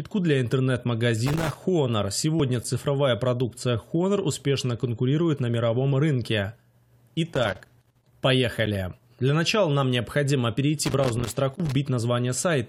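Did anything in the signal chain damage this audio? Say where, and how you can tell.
Yes. The analogue wiring is at fault, with loose connector crackle in three places: 1.27 to 1.57 s, 7.34 to 8.09 s, and 10.85 to 11.72 s. Each burst is irregular and scratchy, and the bursts grow longer through the clip. A worn or dirty contact is opening and closing as the cable moves. That chops the signal on and off. Any DC on the line turns each break into a pop.

The second fault is in playback of the streamed file: a gap between stream segments. Short holes of hard-edged silence sit at 2.64 s and 8.66 s. Each one adds about 8 to 9 ms. The two are almost exactly 6 s apart, which fits 6-second segments. The time stamps of adjacent segments leave a small gap. The player fills it with silence, so the sound stops abruptly and resumes a moment later.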